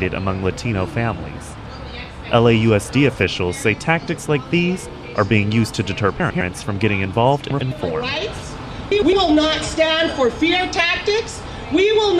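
At 6.20–6.41 s, 7.50–7.72 s and 8.91–9.13 s, frames out of order: two adjacent blocks of about 104.5 ms each swap places, which fits runs of four frames. Each stretch plays its halves reversed, giving a garbled flutter, without losing time.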